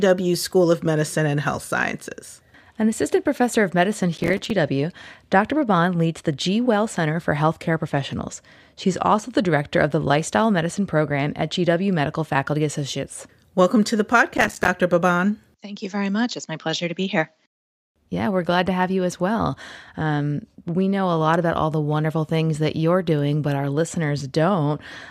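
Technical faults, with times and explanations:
4.18–4.51 s and 14.37–14.68 s: processor overload crackle. Tiny buffers of a few milliseconds repeatedly missed deadlines and dropped to silence, causing gritty tearing. The waveform shows rapid gaps, and the spectrogram shows dense vertical broadband streaks.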